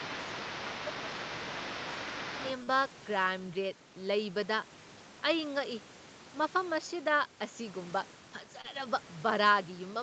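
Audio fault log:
0.0–2.53 s, other side's voice leaking through: a second voice sits about 10 dB under the talker, likely loudspeaker echo left in the microphone. It adds a voice rather than removing any.
0.09–0.19 s and 0.68–1.08 s, speech suppressed in double talk: the talker drops by about 10 dB, then about 5 dB, while the leaked voice overlaps, likely the canceller ducking both. Level falls without smearing.
2.63–2.69 s and 8.61–8.66 s, short concealed packet loss: 40 ms and 20 ms holes are bridged by extending the preceding sound, heard as a brief smear or wobble rather than a level dip.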